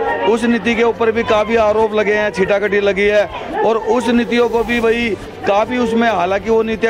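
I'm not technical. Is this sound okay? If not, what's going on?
Yes, this sound is okay. Nothing in it points to a technical problem.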